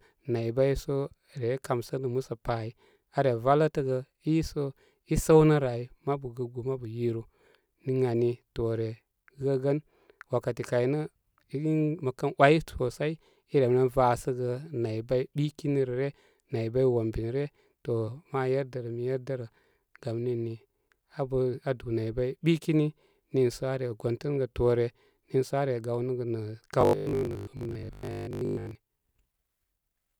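From 26.81 to 28.77 s the speech takes on robotic sound from repeated short buffers: a rigid, metallic 50 Hz buzz that loosely tracks the words. This is likely a 20 ms block replayed while incoming audio stalls, with most of that stretch made of repeats.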